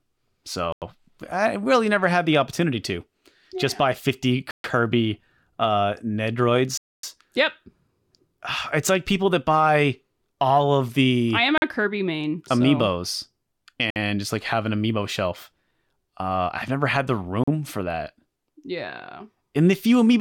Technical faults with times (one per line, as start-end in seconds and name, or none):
0.72-0.82 Bluetooth stall
4.51-4.64 Bluetooth stall
6.77-7.03 Bluetooth stall
11.58-11.62 Bluetooth stall
13.90-13.96 Bluetooth stall
17.44-17.48 Bluetooth stall